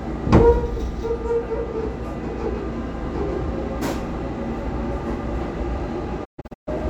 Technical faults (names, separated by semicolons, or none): digital broadcast dropout